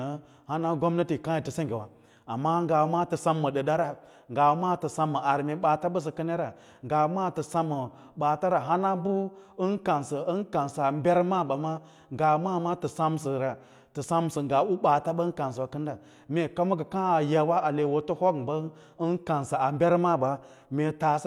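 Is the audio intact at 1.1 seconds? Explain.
Yes, the audio is intact at 1.1 seconds, with no dropout, click, distortion or other fault to be heard at that point.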